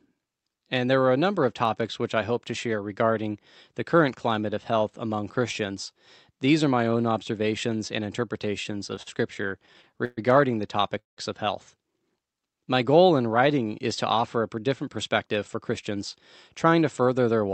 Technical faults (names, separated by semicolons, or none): repeated stalls (stutter); call audio freeze; jitter buffer speed-up